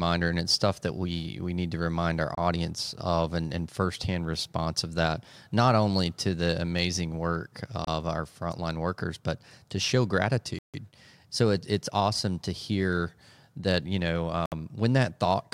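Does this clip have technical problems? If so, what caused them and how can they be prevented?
Yes. Bluetooth stalls cut the speech to silence four times: at 2.35 s for 26 ms, at 7.85 s for 28 ms, from 10.59 to 10.74 s for 152 ms, and from 14.46 to 14.52 s for 63 ms. Each time the audio drops out and then resumes, likely because radio interference held up packets until the headphones' buffer ran empty. Keeping the phone close to the headphones with a clear line between them, and reducing nearby 2.4 GHz traffic, prevents these dropouts.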